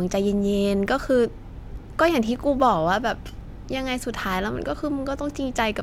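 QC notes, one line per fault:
No faults were found in this speech clip. Nothing needed marking at any point.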